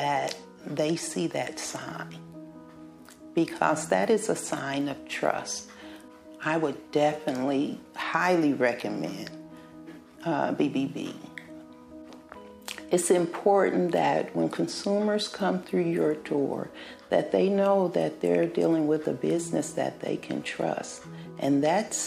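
No faults detected in this clip.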